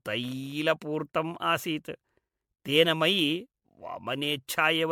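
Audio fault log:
Throughout: generation loss. The speech has that swirly, hollow quality and smeared consonant attacks, more than one encode at this rate would cause. It's likely from being run through an MP3 codec around seven times, each pass landing on a different frame grid and re-quantising, so the noise and spectral gaps pile up. It sounds like roughly 96 kbit/s, and there's nothing above about 19.9 kHz.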